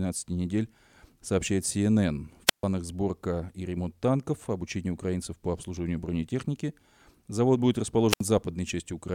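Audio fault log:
2.47–2.64 s and 8.09–8.22 s, wireless microphone squelch dropout: the radio link fades, hiss rises, then the receiver's squelch mutes the speech for about 139 ms and 70 ms.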